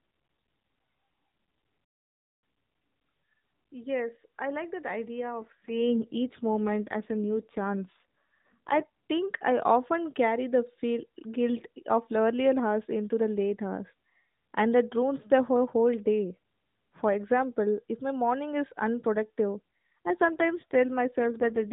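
At 1.85 s the speech cuts to silence for just under 0.6 s, until 2.42 s, most likely a playback stall where the player ran dry or its thread was held up. From 2.42 to 2.98 s the speech rushes at twice normal speed but keeps its pitch. This is time-compressed catch-up, where the player trims and cross-fades small slices to clear its backlog. From 5.2 s, right after "I like that", the voice turns coarser and buzzier, with no gap and no change in bandwidth, until 9.11 s, just before "I often carry the". That is an AMR rate drop, consistent with the link stepping down from about 12.2 to 5.9 kbps and giving the freed bits to error protection. The same roughening returns from 19.56 s to the end. Throughout, the AMR narrowband mobile codec keeps everything below 4 kHz, with only light codec colouring at its normal rate.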